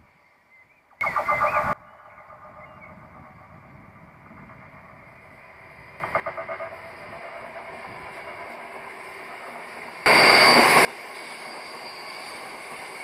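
At 1.01–1.73 s, 6.0–6.2 s and 10.06–10.85 s, sudden gain jumps of about 24, 12 and 24 dB push sound and background noise up together, instantly rather than ramped like a fade or compressor, likely from an abrupt gain step.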